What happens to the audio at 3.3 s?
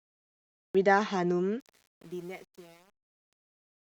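At 3.3 s you're deep in the fade-out, right in the truncation distortion on the fade that runs from about 1.6 s to the end of the clip. The fade stage keeps too few bits and adds no dither, which fits an 8-bit path. As the level drops toward the smallest step, the speech collapses into a handful of square steps. From about 1.73 s onward it's at its worst, so by 3.3 s it's gritty.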